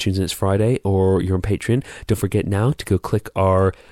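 At 2.13 s, just before "forget now to", and again at 3.35 s, right after "forget now to", compressed frames are skipped. The speech jumps ahead by about two frames (about 50 ms) and then by one (about 20 ms), which fits a 24 ms frame. The waveform shows a discontinuity, and the spectrogram a narrow vertical seam where the spectral pattern shifts abruptly.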